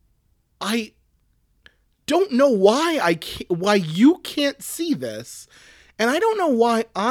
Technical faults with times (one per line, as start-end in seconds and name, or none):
none